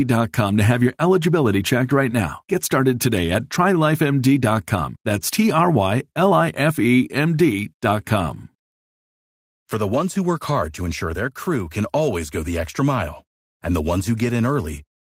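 No technical faults can be heard anywhere in the speech recording; the signal stays steady and intact from beginning to end.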